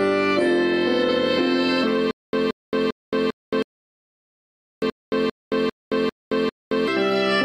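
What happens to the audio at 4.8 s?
At 4.8 s the audio is just leaving a rebuffering stall. From 3.62 to 4.82 s the player ran dry and went silent. The sound then resumes where it stopped, with about 1.2 s added. This sits inside a stutter with silent gaps, from 2.11 to 6.88 s. A 0.18 s burst repeats every 0.40 s, with 0.22 s of digital silence between. It returns nine times, likely from a stalled stream replaying its last fragment. The audio in that span is lost.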